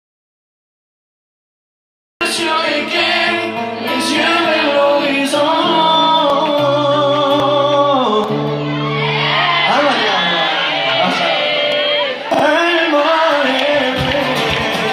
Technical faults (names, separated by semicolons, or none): audio dropout to silence; dropped buffer (overrun)